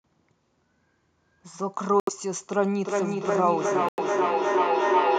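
At 2.00 s the speech cuts to silence for 75 ms and resumes at 2.10 s. This is a Bluetooth stall, likely caused by interference delaying packets until the headphone buffer ran dry, so playback paused until retransmissions arrived.

From 2.79 s to the end, a feedback echo between two devices sets in. One device replays what the other's microphone sent, and that microphone captures it again. Each echo canceller removes only its own playback, so the speech returns roughly every 0.4 s. The repeats reach about 1 dB above the direct speech and build up instead of decaying.

At 3.89 s a second stall drops the sound for 95 ms, and playback picks up again at 3.99 s, inside the echoing section.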